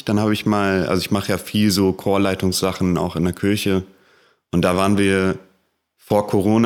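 No technical faults can be heard anywhere in this recording.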